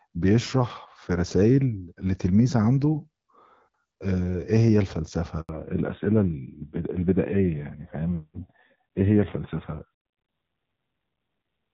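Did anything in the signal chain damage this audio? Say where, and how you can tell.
Yes. A handover gap in the network stage cuts the speech from 5.41 to 5.49 s. For 80 ms no speech frames arrive while the call moves between networks, so the voice stops abruptly and whatever was said in that span is lost.

A fallback to narrowband at the codec stage follows from 5.49 s to the end. Everything above 4 kHz disappears and the voice turns duller and rougher. This fits a switch from AMR-WB at 12.65 kbit/s down to AMR-NB at 7.4 kbit/s.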